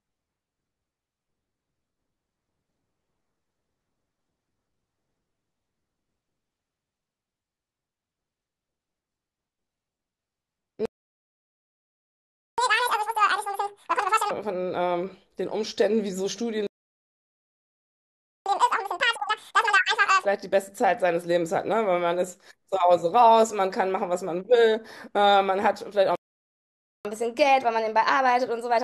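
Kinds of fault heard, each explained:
Playback stall: The speech cuts out mid-flow three times and resumes after a gap, likely because the player ran short of buffered data or its output thread was held up. The gaps run from 10.86 to 12.58 s (1.73 s), 16.67 to 18.46 s (1.79 s) and 26.15 to 27.05 s (0.90 s). On a waveform each appears as a flat line cutting abruptly into ongoing speech. A spectrogram shows a blank vertical band across every frequency.
Catch-up at higher speed: After each gap the player races through its backlog by resampling, so tempo and pitch rise together. From 12.58 to 14.31 s and from 18.46 to 20.25 s it runs at 2.0 times speed, roughly ten semitones high. From 27.05 s to the end the rate is 1.15 times, roughly two semitones up. A spectrogram shows harmonics and formants shifted upward and syllables compressed in time. A waveform shows denser, shorter bursts.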